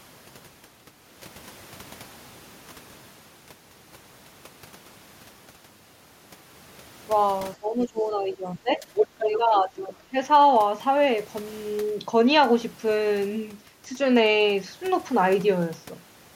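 From 7.55 to 8.86 s the speech dips by roughly 15 dB and thins out in pieces, speech suppressed in double talk, likely because the echo canceller turned down the talker along with the echo. Around 7.81 to 7.85 s a faint scrap of the other side's voice leaks through, well below the speech. From 8.95 to 9.37 s that voice returns about as loud as the talker, likely echo the canceller left in the microphone signal. From 9.22 to 10.15 s the speech ducks by roughly 15 dB again, likely the canceller clamping down while both sides talk at once.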